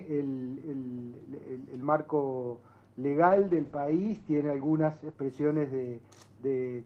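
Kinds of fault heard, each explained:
call bitrate drop: From 3.31 to 5.77 s the encoder codes at a much lower rate, fitting a fall from about 32 to 10 kbps. Bandwidth narrows from 20 kHz to 8 kHz, leaving the sound coarse and muffled, worst for 1.14 s.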